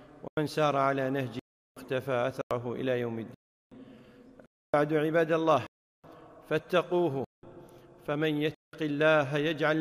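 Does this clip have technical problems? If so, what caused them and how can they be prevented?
Yes. The output buffer wasn't filled in time, so whole blocks went out as zeros, causing blocks of digital silence. The holes fall at 0.28, 1.39, 2.42, 3.34, 4.46, 5.67, 7.25 and 8.55 s and last 93, 372, 93, 372, 279, 372, 186 and 186 ms, lengths that fit multiples of a 4096-sample block. A larger buffer or lighter real-time processing would prevent this.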